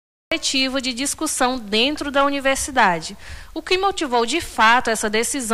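Capture began late, after the sound was already under way, so the opening of the clip is a cut-off start. The first 0.32 s hold digital silence, and at 0.32 s the audio switches on abruptly partway through an ongoing sound. Because the recording never caught its beginning, there is no natural attack or fade-in: the level jumps straight from nothing to full, and the sound arrives already in progress rather than building up.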